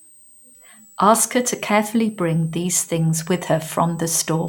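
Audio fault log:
throughout, switching supply whistle: faint tone drifting 7.8 to 8.3 kHz, roughly 30 dB under speech, from a power supply switching audibly; thin wavering spectrogram line.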